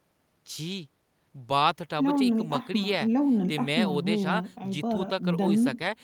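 A short piece of speech, and there's nothing technically wrong to point to here: no dropouts, glitches or other faults turn up anywhere in it.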